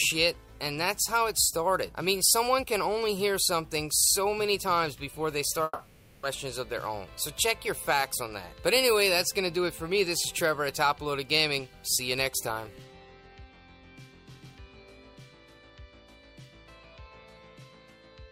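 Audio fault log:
5.63–6.25 s, long network dropout: the sound stops being itself and turns into a buzzy smear of the last moment before the gap, stretched out for about 0.6 s and fading, with only a brief instant of near-silence before the audio returns. What resumes at 6.25 s picks up further along, so about 0.6 s of the original is simply gone. This is likely a stall in incoming packets, with the receiver concealing the hole by extending the last sound.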